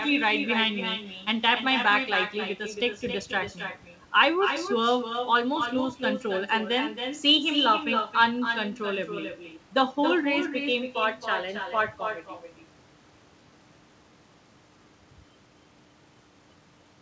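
Right through the speech there's an echo with no canceller: the far end's speaker leaks back into its mic and nobody strips it out, so every phrase returns around a third of a second later, only about 6 dB down and thinner. The band stops at 8 kHz, which fits a G.722 call leg.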